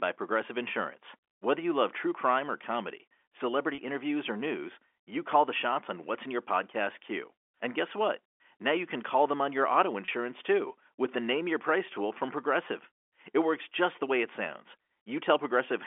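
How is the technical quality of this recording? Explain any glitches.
The speech comes through a telephone-band line with three brief dropouts. The G.711 telephone coding is audible in the narrow 300 Hz to 3.4 kHz band.

Packet loss with pitch repetition occurs at 3.75 s (after "crime or comedy celebrity"), 8.37 s (after "guess what") and 10.05 s (after "them on your auto"). Each time one 30 ms packet vanished and the receiver looped the last pitch period to cover it, producing a brief held, buzzy tone. A waveform shows identical repeated cycles; a spectrogram shows flat, unchanging harmonic stripes.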